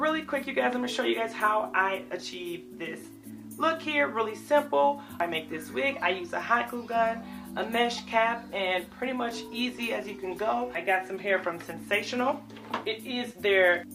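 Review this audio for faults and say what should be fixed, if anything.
Nothing needs fixing, as the signal holds steady throughout with no audible technical faults.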